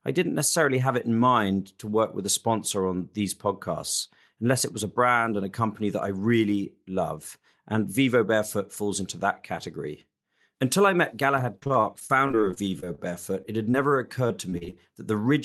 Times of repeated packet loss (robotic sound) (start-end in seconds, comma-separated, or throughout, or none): 11.37-13.00, 14.28-14.74